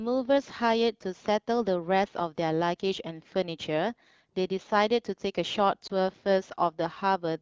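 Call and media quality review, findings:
Lost AMR speech frames, 5.87–5.92 s: warbling dip consistent with one 20 ms frame; decoder replayed the last pitch and vocal tract settings at falling gain. Spectrogram: smeared, dimmed harmonics.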